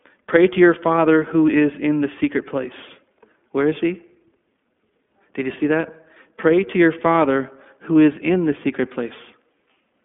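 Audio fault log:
Throughout, iLBC codec: independent coding of each short frame, fitting 20 ms frames at 15.2 kbps, removes everything above 3.7 kHz and leaves the speech plainly rough and synthetic.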